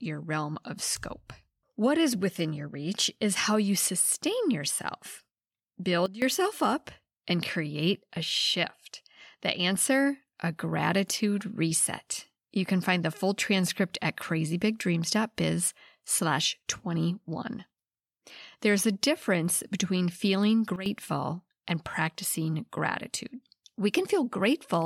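Sudden gain jumps occur at 6.06 to 6.22 s and 20.76 to 20.86 s, where the speech and its background noise drop together by about 15 dB and about 12 dB, likely from a gain change applied between adjacent samples without any ramp.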